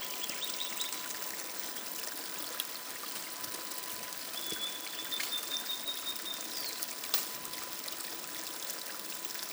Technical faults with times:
0.00-9.52 USB whine

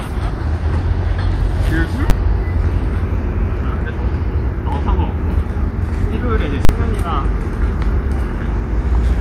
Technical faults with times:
2.10 invalid numbers at full scale
6.65-6.69 invalid numbers at full scale

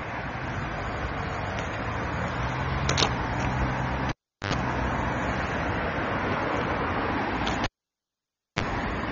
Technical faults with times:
0.00-9.12 AAC compression
4.09-4.54 cable pulled and plugged in
7.64-8.63 cable pulled and plugged in

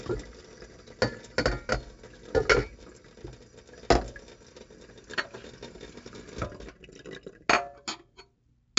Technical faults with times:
0.00-8.78 4-bit ADPCM compression

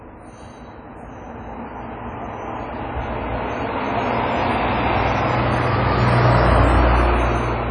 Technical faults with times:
0.00-7.71 WMA compression

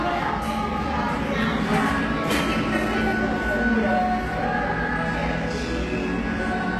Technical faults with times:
0.00-6.80 HE-AAC compression

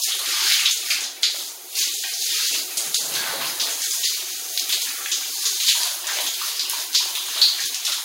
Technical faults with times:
0.00-8.05 sample clock jitter

